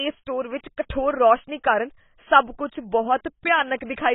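AAC compression damage runs through the whole clip. Nothing survives above about 3.8 kHz, so the speech sounds dull and boxed-in, and sibilants turn fizzy and smeared rather than crisp. The cause is likely heavy AAC-LC coding at a very low rate, which fits a bitrate around 16 kbps. There the encoder discards the upper band entirely and quantises the remaining frequency lines coarsely, leaving a warbling texture on sustained sounds.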